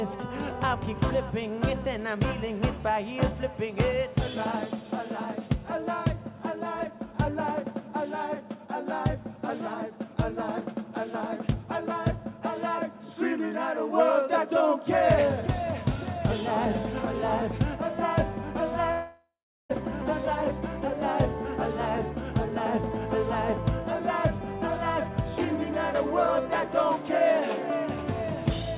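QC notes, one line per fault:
18.92–19.71 s, long network dropout: audio likely stopped arriving for about 0.78 s, so the receiver stretched the last sound into a fading buzz, leaving about 0.37 s of near-silence before the sound returns with that section gone.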